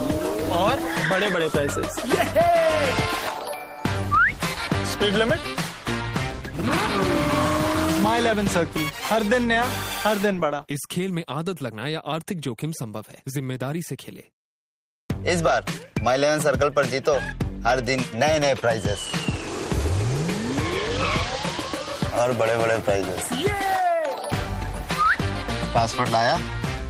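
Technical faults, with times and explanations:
No technical faults can be heard anywhere in the audio.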